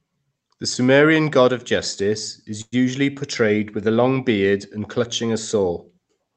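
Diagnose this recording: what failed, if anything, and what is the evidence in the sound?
Call audio freeze, 2.61 to 2.74 s, just before "usually portrayed with a": packets likely stalled in the network and the jitter buffer emptied. The last sound is stretched into a fading buzz or hiss, ending in 30 ms of silence, then resumes with nothing lost. A spectrogram shows smeared horizontal bands fading to a blank strip.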